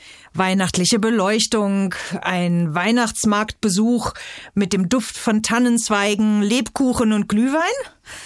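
Throughout the clip, a steady tick at 10 Hz marks a resampler restarted on every block. Each 100 ms block, in a conversion that appears to halve 48 kHz to 24 kHz, was converted alone, leaving edge errors. The waveform shows small glitches every 100 ms, and the spectrogram shows thin vertical lines wherever signal is present.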